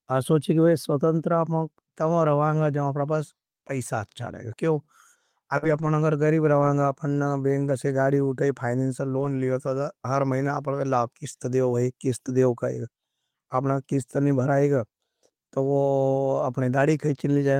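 At 5.57 to 5.64 s a burst of packet loss occurs: about 48 ms of concealment stretches the preceding sound into a fading tail, then about 40 ms of audio is skipped. From 5.62 to 5.88 s and again at 9.16 to 9.26 s, lost packets rebuilt from error correction leave no gap, but those stretches sound rougher and noisier, decoded from lower-quality redundant copies.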